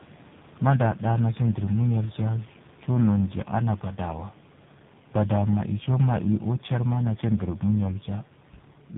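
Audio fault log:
Throughout: tandem speech coding. The speech sounds rough, muffled and warbly, as if squeezed through three speech codecs in a row, likely G.726, GSM full rate and AMR-NB. Each coder re-encodes the previous one's damage, and nothing survives above 3.8 kHz. The room noise sits about 26 dB under the speech.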